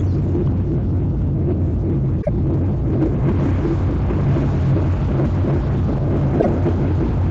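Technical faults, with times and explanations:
2.21 to 2.29 s and 6.39 to 6.47 s, repeated frames: a short block of compressed audio plays twice in a row, heard as a stutter. The first repeat is 26.1 ms long, which fits a single frame; the second is 52.2 ms, which fits two. Each one adds its own length to the clip's running time. Unlike a dropout, no audio goes missing. The same material simply comes back at once.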